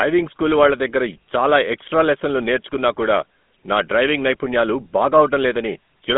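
A buzzy, gravelly roughness runs through the whole speech recording, with thin, boxy tone and nothing above about 3.8 kHz, from a GSM full-rate codec at a rate that fits 13 kbps. It rebuilds the voice from a coarse vocal-tract model excited by sparse regular pulses, over a phone band of roughly 200 Hz to 3.5 kHz.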